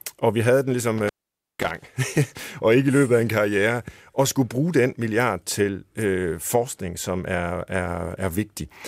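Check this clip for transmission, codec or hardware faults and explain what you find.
There is one hardware fault. Right after "og vi havde den", at 0.98 to 1.71 s, the speech drops out with crackle at both edges, leaving faint hiss for about 0.5 s. This is an intermittent contact: a loose cable or plug briefly opening the signal line.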